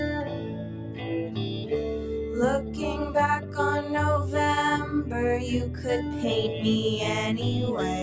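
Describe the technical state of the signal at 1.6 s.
At 1.6 s the sound sits inside a dip from 1.53 to 1.71 s. Here the sound is cut by the noise suppressor. It mistook this passage for noise and pulled it down by up to about 4 dB. The steadier, fading parts sink and their decay shortens. Sharp onsets come through better.

The dip sits within a wider fault. A noise suppressor tuned for speech is applied to these sounds throughout. It treats held tones, ambience and tails as noise. Its gain moves across a swing of around 5 dB, so the level pumps and thins. The call microphone processing passes nothing above 8 kHz.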